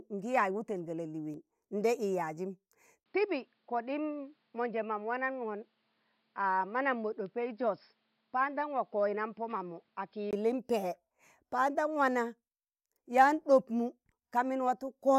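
At 3.04 s the speech cuts out for 20 ms, then returns dull, with nothing above 5.3 kHz, about 5 dB quieter and over a new faint noise floor. The input was likely switched to a poorer device. Full bandwidth returns at 10.33 s.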